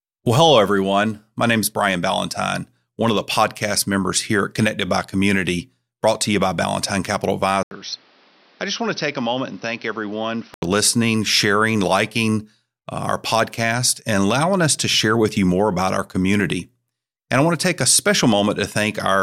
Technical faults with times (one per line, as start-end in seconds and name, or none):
7.63-10.62 input switched to a poorer device